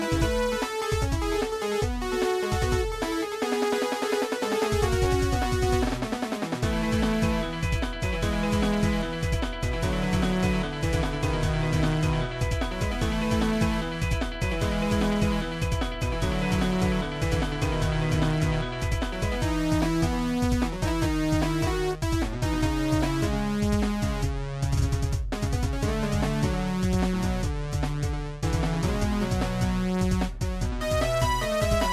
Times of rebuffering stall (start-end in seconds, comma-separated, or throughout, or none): none